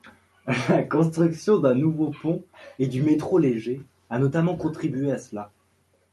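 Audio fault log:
No faults are present in the speech, which has passed through a WebRTC call path where the Opus codec leaves its ordinary coding noise and limits the top of the spectrum at 12 kHz.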